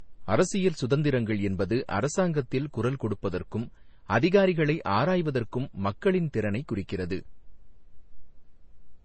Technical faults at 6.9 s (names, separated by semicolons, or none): transcoding between lossy codecs